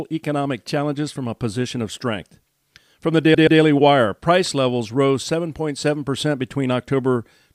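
At 3.34 s the speech hits a stutter from repeated frames. A 128 ms block of the compressed stream, which fits a run of about four frames, got written or sent more than once, so the decoder plays that same slice twice more back to back before moving on. It lasts until about 3.60 s, and you hear a quick mechanical repeat of the same fragment. The extra plays stretch the speech by 256 ms, shifting everything after that point later.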